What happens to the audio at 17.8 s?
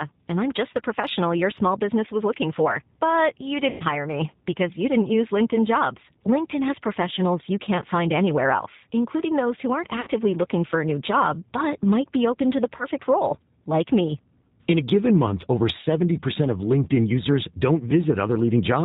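At 17.8 s you're still hearing the G.729 codec, the same as everywhere else in the clip. The speech is rebuilt from a vocal tract filter, pitch predictor and sparse pulses with nothing above 4 kHz, so it sounds band-limited, rough and a bit synthetic, which fits an 8 kbit/s G.729A stream.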